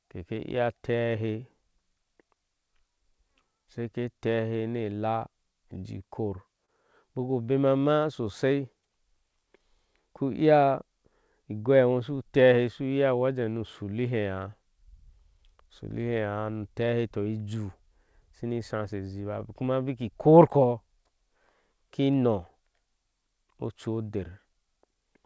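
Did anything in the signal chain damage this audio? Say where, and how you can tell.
Yes, the damage sits in the network and jitter-buffer stage of the call, not in the codec. Clock drift between sender and receiver runs through the whole clip: the sender's clock is roughly 2% slow, so the receiver's buffer keeps draining and must be refilled.

To compensate, the receiver makes repeated timing corrections from 0.18 s to 25.04 s, repeating short pieces and playing at about 98% speed. In total it inserts roughly half a second, heard as a slightly dragging tempo with occasional faint hiccups.

At 6.66 to 6.71 s, a short stall from a late packet occurs. The buffer ran empty, and the receiver stretched the last sound for 27 ms until the packet arrived. Nothing is lost, but the sound is held too long, with a slight buzz or dip, and playback delay grows by 27 ms.

Between 15.57 s and 19.45 s there are scattered short gaps, about four, each roughly 10 ms or less. 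The receiver patched them by continuing the preceding sound, leaving brief ticks or smears. The band limit at 8 kHz is consistent with the G.722 call codec.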